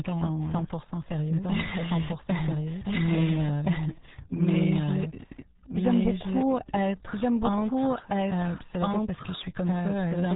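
A speech recording carries two faults for its whole length. The first is a doubled audio track. A second, full-band copy of the speech runs about a second and a half behind the original at roughly the same loudness, so the two overlap and compete. Unlike an echo or reverb, the copy does not decay, gains no room colour, and does not repeat again. It is a single clean duplicate, most likely the same audio captured a second time by a slower path or two out-of-step copies left in an edit. The second fault is the RealAudio 14.4 codec, applied heavily. Nothing above 3.8 kHz survives, and the speech sounds muffled and gargly, which fits an 8 kbit/s dial-up speech codec. What separates this from a simple low-pass filter is the gargly distortion inside the remaining band. A filter would only dull the sound, while this codec also smears and garbles what it keeps.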